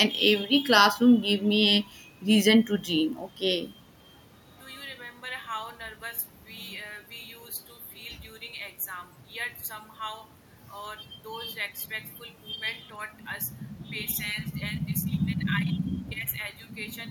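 Nothing in this speech recording stood out as a technical problem on listening.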